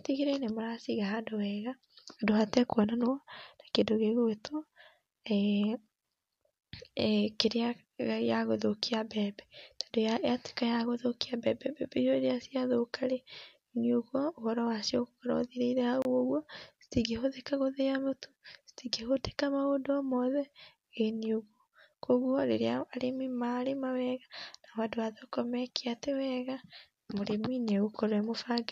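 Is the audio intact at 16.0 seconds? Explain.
No. A Bluetooth stall runs from 16.02 to 16.05 s: the speech drops to 28 ms of silence and then resumes. Radio interference likely delayed packets, so the headphones' buffer emptied and playback paused until the retransmitted audio arrived.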